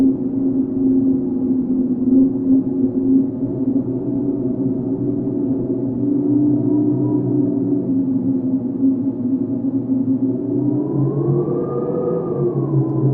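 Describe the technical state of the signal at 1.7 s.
At 1.7 s the top end is dull, with little real treble. What high-frequency content there is sounds smeared and synthetic, and coding artefacts are stronger. This is an adaptive stream starting at a low bitrate. From 0 s to 6 s the player uses a lean version of the stream to begin quickly, one that fits Opus at about 12 kbit/s. At 6 s it steps up, consistent with roughly 64 kbit/s, and the quality jumps with no gap.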